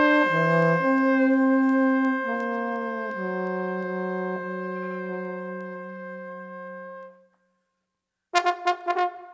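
A digital audio link was read by a receiver running on its own clock, not locked to the sender's, with the two clocks drifting apart by what sounds like roughly 70 ppm. Each time they slip past each other, a single sample is dropped or repeated and its neighbours are misread. The result is word clock ticks: sharp clicks of uneven strength, about every 0.4 seconds from 0.27 s to 9.16 s, around thirty in all. The audio also passed through a call's microphone processing, which leaves nothing above 8 kHz.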